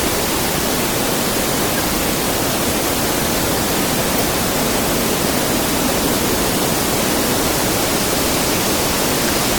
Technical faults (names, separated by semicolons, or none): corrupt frame decoded